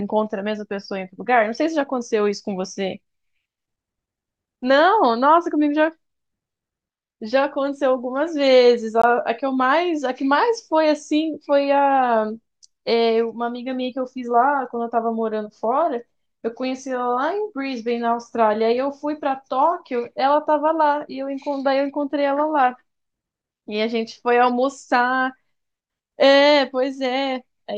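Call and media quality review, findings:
Block of digital silence at 9.02 s in speech: a gap of about 19 ms with hard edges, heard as a short dropout. Probable component: audio render/output path. Mechanism: output buffer not filled in time, so the missing block was zero-filled and the waveform cut abruptly to silence and back.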